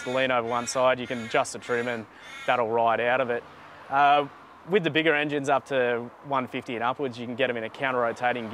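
Nothing in this one trips the ear: no glitches, dropouts or odd artefacts turn up anywhere along the way.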